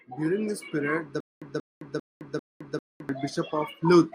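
From 1.20 to 3.09 s, a stutter with silent gaps: a 183 ms burst repeats four times, each followed by 214 ms of digital silence, likely a stalled stream.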